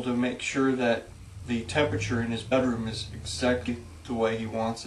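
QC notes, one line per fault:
2.51 s and 3.67 s, compressed frames skipped: at each point the audio jumps forward. The first skips roughly 50 ms, which fits two frames of 23.2 ms. The second skips roughly 150 ms, which fits about seven. Whole frames never reach the output, either missing or rejected as damaged. The overlap between neighbouring frames smears each join into a short blip, not a sharp click.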